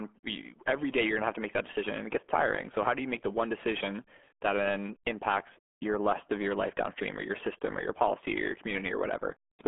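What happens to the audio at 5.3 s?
RealAudio 14.4 codec damage is present at 5.3 s, as it is across the whole clip rather than at one moment. This early dial-up speech codec squeezes the signal into a very low data rate, which the sound suggests is around 8 kbit/s. It keeps only a narrow band of roughly 200 Hz to 3.4 kHz and discards everything above about 3.8 kHz. The speech therefore sounds muffled and heavily gargled.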